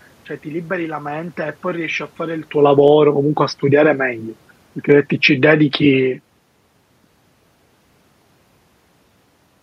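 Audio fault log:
2.55–3.0 s, automatic gain falling: the gain control judged the input too loud or its background too strong and eased the level down by about 4 dB. The room background sinks along with the voice, unlike the talker moving around 2.5 s, where background stays steady.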